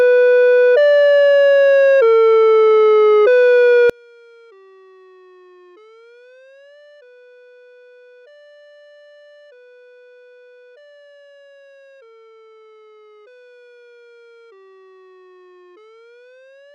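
From 3.9 s to the end, the mono sum collapses by about 34 dB to a faint residue, likely one channel inverted, cancelling the shared content between channels.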